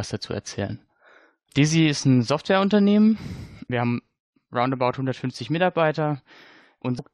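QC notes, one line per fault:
0.69 s and 6.98 to 7.00 s: damaged data in a compressed stream. Corrupted bytes make the decoder lose frame sync, giving brief glitches in the speech.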